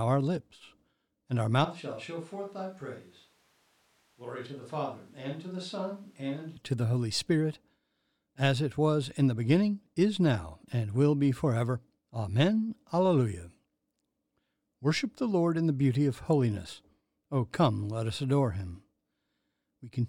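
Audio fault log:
1.65 to 6.57 s, switch to a distant microphone: right after "our lips and our" the speech turns roomy and hollow, loses its low end and drops by roughly 10 dB, with background noise rising to around 30 dB below the speech. It snaps back to close, full sound just before "to the". The likely cause is that the close microphone's signal dropped out and a farther pickup, such as a camera microphone, took over, hearing more room and less direct sound.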